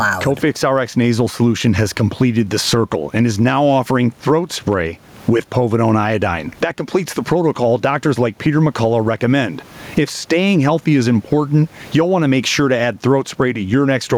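Gain pumping runs throughout this speech recording. The room noise, about 39 dB below the speech, swells in each pause and ducks by around 15 dB under every loud passage, likely from input gain set far too high with a fast limiter clamping each peak.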